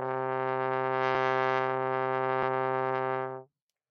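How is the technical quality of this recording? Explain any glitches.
One glitch is audible: compressed frames skipped at 2.42 s. About three 26.1 ms frames drop out, so roughly 70 ms vanishes. The overlap smears the join into a soft blip, seen as a faint vertical seam on a spectrogram.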